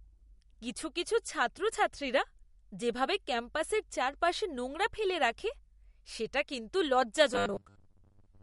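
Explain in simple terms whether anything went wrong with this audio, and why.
MP3 compression, throughout: the watery, swirly quality is plainly audible and nothing is heard above about 11.2 kHz, which likely comes from saving the file as a low-quality MP3, where quiet detail is discarded and the treble is cut off.

Robotic sound from repeated short buffers, from 7.34 s to the end, right after "সেটা কিন্তু": the speech turns into a rigid 100 Hz buzz. Likely the audio arrived too slowly, so the software kept replaying 10 ms scraps for about half the time.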